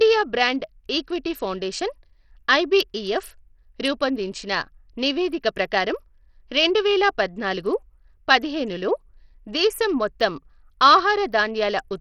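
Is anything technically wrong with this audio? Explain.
Yes, the whole speech clip has heavy coding damage that sounds like Bluetooth SBC compression, likely from a low-bitrate link. Nothing comes through above about 15.8 kHz, and the upper bands flicker in and out because the codec's starved bit pool leaves the weak treble sub-bands with few or no bits while the rest get coarsely quantised. You hear a gritty, grainy haze riding on the speech, which fits something around 64 kbps.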